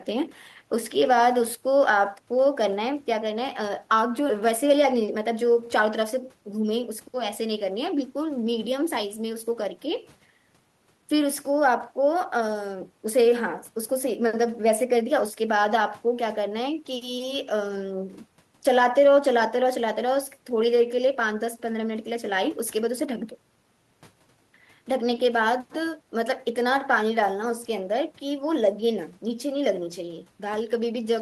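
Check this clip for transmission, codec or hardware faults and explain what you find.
Two transmission faults turn up in the speech, both around the four-second mark: a skip ahead followed by a jitter buffer speed-up.

Between 4.29 and 4.31 s there is a skip ahead. Roughly 0.7 s of speech never plays. It was lost in transit or discarded when the jitter buffer overflowed with later packets already queued, so playback jumps straight to newer audio with no filler. The speech lurches forward mid-flow, with part of the utterance missing. On a waveform the two sides butt together almost seamlessly. On a spectrogram, harmonics and formants change abruptly at one vertical line with no silent gap.

From 4.41 to 6.42 s a jitter buffer speed-up follows. The buffer holds more audio than its target, so the receiver trims short pitch-period-length pieces again and again, removing around a tenth of a second in total. 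Speech runs at about 105% speed with unchanged pitch and sounds slightly hurried. A spectrogram shows normal harmonic spacing but syllables and pauses compressed in time. The waveform shows periodic cycles repeatedly dropped at joins.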